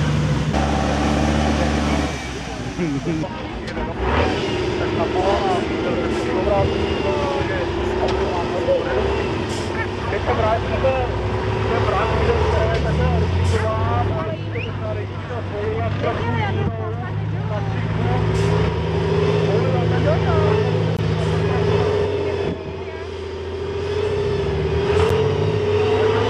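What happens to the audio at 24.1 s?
Nothing goes wrong at 24.1 s; the audio plays through that moment intact, with no dropout, click or other fault.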